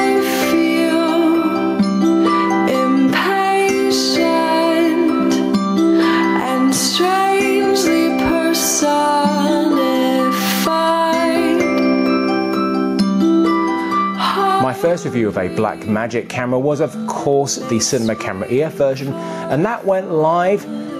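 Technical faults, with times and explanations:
Throughout, gain pumping: the gain ducks by about 10 dB under every loud sound, squashing loud and soft parts together. The likely cause is gain set far too high, with a fast limiter clamping each peak.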